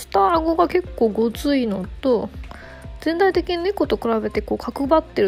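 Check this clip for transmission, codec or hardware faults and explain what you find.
No faults found.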